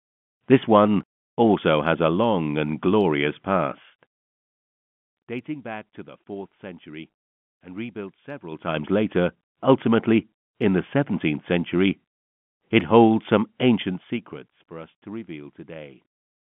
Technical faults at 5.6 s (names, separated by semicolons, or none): none